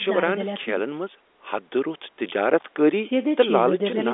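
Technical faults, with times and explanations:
No technical faults are present: the speech carries the ordinary bandwidth of G.711 telephone coding, with nothing above about 3.8 kHz, after the usual call microphone processing.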